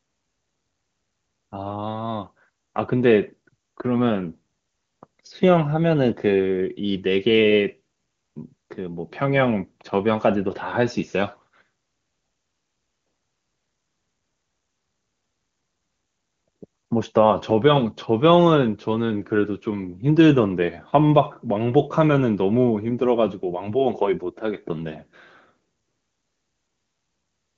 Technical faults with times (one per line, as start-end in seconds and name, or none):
none